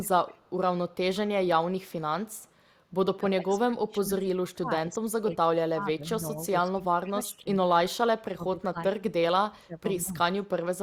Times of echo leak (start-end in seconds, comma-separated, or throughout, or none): 0.02-0.51, 0.93-1.16, 2.29-2.51